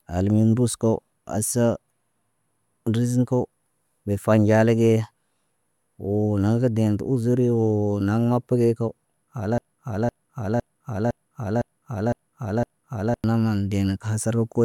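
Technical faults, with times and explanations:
9.58–13.24 s, broken-record loop: a 0.51 s fragment of speech repeats exactly, seven times back to back. The player or stream likely stalled and kept resending the last piece it held. The speech that belonged in those 3.7 seconds is lost.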